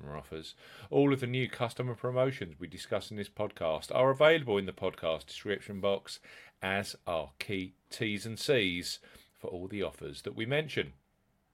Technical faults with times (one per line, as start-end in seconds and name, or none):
none